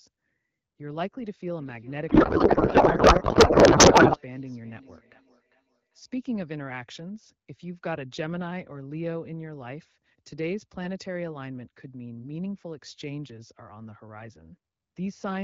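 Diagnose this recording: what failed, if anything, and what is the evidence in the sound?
Call processing failed: two devices on the same call in one room formed a loop, causing feedback echo between two devices. From 1.6 to 6.33 s, speech returns roughly every 0.4 s, peaking at about 17 dB below speech.

At the codec, the receiver misread the AMR payload. From 2.09 to 4.18 s, speech turns to garbled, warbling noise, which fits octet-aligned frames being parsed as bandwidth-efficient.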